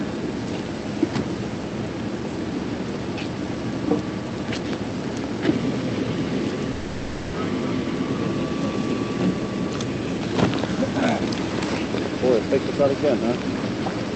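The audio, carried over a call path whose content stops at about 8 kHz (consistent with Opus at around 32 kbps), has two faults. From 6.71 to 7.35 s there is a call audio freeze, likely caused by packets held up in transit so that the jitter buffer ran dry. For about 620 ms the receiver stretches the last sound into a fading buzz or hiss, then resumes exactly where it stopped. Nothing is lost, but everything after it arrives 620 ms later. On a spectrogram this shows as smeared, repeating horizontal bands that dim across the gap. In the waveform it appears as a decaying, periodic-looking stretch with no clean silence. From 12.53 to 13.16 s a jitter buffer speed-up trims the backlog. Many pitch-period-sized slices, totalling around 70 ms, are cut out, so the audio plays about 10% faster at unchanged pitch and sounds hurried. The spectrogram's harmonics stay at the same heights while events crowd closer together in time. 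The waveform shows normal-length cycles with small splice points.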